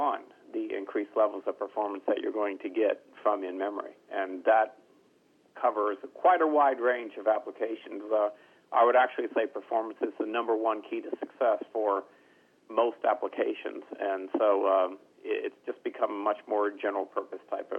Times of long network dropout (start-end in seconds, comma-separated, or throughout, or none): none